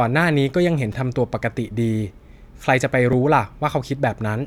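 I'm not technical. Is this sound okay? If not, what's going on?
No. A repeated buffer at 0.92 s and 3.13 s: the audio briefly ran late, so the device replayed its last tiny chunk, three extra times and then once, heard as a quick click or buzz.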